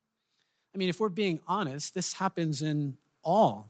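From 0.72 s to the end, automatic gain rising swells speech and background together as the gain control lifts a quiet input; the waveform envelope widens steadily, brightening the spectrogram throughout.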